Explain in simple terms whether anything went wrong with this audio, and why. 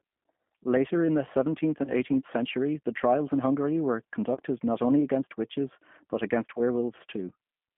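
G.729 codec, throughout: the speech is squeezed into a narrow phone band of about 150 Hz to 3.4 kHz and rebuilt from a simple voice model, so it sounds muffled, rough and slightly synthetic. VoIP packet loss concealed by the speech codec, at 1.84–1.92 s, 4.35–4.38 s and 6.54–6.60 s: chunks of audio went missing, and the decoder filled each gap by stretching the preceding sound into a brief buzzy or noisy, fading smear. The first gap suggests two lost packets, the others one each.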